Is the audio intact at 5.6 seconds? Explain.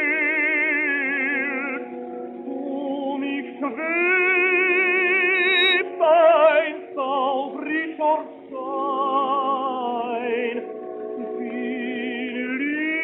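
No. At 5.6 seconds the audio is swamped by loudspeaker feedback squeal, which runs from 5.34 to 5.82 s. A microphone is picking up the loudspeaker it feeds, and at 3.8 kHz the loop gain tops one, so that tone feeds on itself. It swells over roughly a third of a second to a piercing whistle a few decibels above the program. Unlike a steady interference tone, it grows from nothing, then stops.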